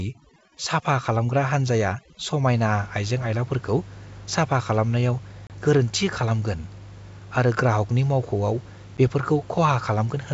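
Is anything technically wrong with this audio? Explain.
Yes. From 0.0 to 2.56 s, overdone noise removal cuts bands near the noise estimate, leaving twinkling specks in the lowered background; plain low-level hiss would stay steady.

Packet loss on an ADPCM call occurs at 5.47 s (30 ms gone, which fits about three packets) and 8.97 s (10 ms, about one packet). Silence fills each hole, and the decoder's predictor and step size drift from the sender's. Speech returns slightly distorted before settling, unlike a clean dropout. Room noise sits about 24 dB below the speech.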